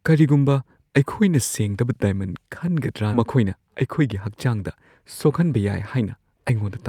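At 3.13 to 3.15 s the speech has a skip ahead. Roughly a second and a half of audio never reaches playback. It was discarded either in transit or when an overfull jitter buffer dropped its backlog, because later speech was already queued. Nothing fills the hole, so the material before and after is butted together with no pause, and the talker seems to leap forward.

From 3.25 to 4.27 s a jitter buffer speed-up follows. The buffer is holding more audio than its target, so the receiver trims short slices of one or a few pitch periods again and again to shed the excess. Around 70 ms in total is removed, and playback runs at about 107% speed for that second. Pitch stays put, but the speech sounds slightly rushed.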